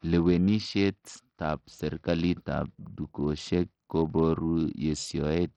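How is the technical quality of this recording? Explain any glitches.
The technical quality is poor throughout, with heavy codec damage across the whole speech clip. Bluetooth SBC compression, likely the cause, runs from start to finish: a starved bit budget, consistent with roughly 64 kbps, leaves the upper sub-bands with almost no bits, so the treble flickers and drops out while gritty quantisation noise and aliasing cling to the speech.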